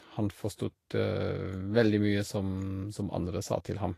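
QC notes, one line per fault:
Throughout, Vorbis compression, likely at a low setting. Nothing comes through above 14.2 kHz, so the top end stops abruptly, and the treble that does survive is grainy and hissy where fine detail has been quantised into noise of roughly the same energy. Consonant edges sound smeared and the speech has a rough, papery texture. The damage is plainly audible and fits a low bitrate of around 35 kbps.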